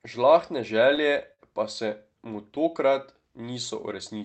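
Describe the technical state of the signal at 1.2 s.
At 1.2 s the audio is affected by clock drift between sender and receiver. It runs through the whole clip. The sender's clock runs about 5% slow. The receiver's jitter buffer keeps draining, so the sound's timing never settles and small hiccups recur.

The moment also falls inside repeated timing corrections, from 1.09 s to 4.19 s. The receiver keeps stretching the sound in small steps to cover the slow sender, playing at 98% speed and adding roughly 50 ms. This is heard, if at all, as slight hiccups or an unsteady tempo, with the call path's 8 kHz band limit underneath.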